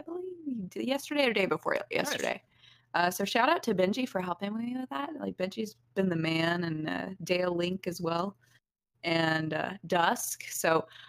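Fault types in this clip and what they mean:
Overlap-add ripple: the sound was chopped into windowed frames and stitched back with an overlap that doesn't add up to a steady gain, so the level dips and swells by about 6 dB every frame, around 30 times a second, all the way through, giving a fast, rough flutter.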